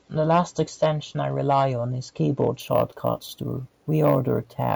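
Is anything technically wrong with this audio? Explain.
Yes. From 2.6 s to the end, the speech shows imaging from sample-and-hold upsampling. The audio was raised from 16 kHz to 48 kHz by repeating each sample three times without an anti-imaging filter, so mirrored copies of the spectrum fold up around 16 kHz. The first image fills 8 to 16 kHz at about 24 dB below the speech, heard as a metallic fizz that tracks loudness. A spectrogram shows an upside-down copy of the speech harmonics above 8 kHz, sliding opposite to the pitch. A zoomed waveform shows flat three-sample steps.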